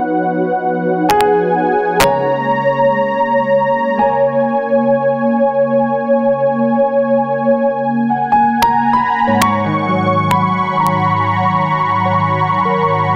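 The audio has integer overflow: loud peaks push about 0 to 2 dB past the integer limit and wrap to the opposite sign rather than clipping, giving sharp cracks at 1.10–1.21 s, 2.00–2.04 s, 8.63 s, 9.42 s, 10.31 s and 10.87 s.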